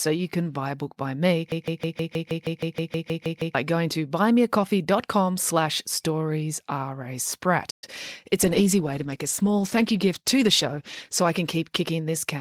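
Speech clip with four technical faults. From 1.52 to 3.55 s there is a broken-record loop. Right after "a book by me", a fragment of about 158 ms repeats exactly, back to back, 13 times. The speech resumes at "going to". The repeats are identical, so the stream likely stalled and kept re-sending the last piece it held. Whatever was said in those two seconds is gone, replaced by the repeated fragment.

At 7.70 s the sound stops dead in mid-flow. This playback stall lasts 120 ms, until 7.84 s. The output goes silent, and then the speech carries on. The player likely ran out of data or had its thread blocked for that moment. The gap is short but clearly audible as a break in the flow.

Straight after, from 7.84 to 7.96 s, comes a time-compressed catch-up. The speech runs at twice normal speed, yet its pitch stays the same. Small pieces are cut out and cross-faded to clear the backlog left by the stall. 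The effect is a brief hurried burst. Then normal pacing returns.

From 8.44 s to the end of the clip there is a call bitrate drop. The speech turns coarser, rougher and more muffled as the high frequencies are cut away. That sound fits an encoder pushed from around 64 kbps down to around 15 kbps after the call's bandwidth estimate fell. The quality does not recover before the clip ends.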